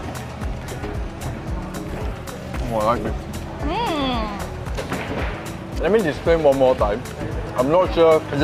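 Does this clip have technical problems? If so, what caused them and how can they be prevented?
No, this clip has no technical problems to identify, so there is nothing here to trace or prevent. Nothing in the sound points to a fault in how it was captured, processed or delivered.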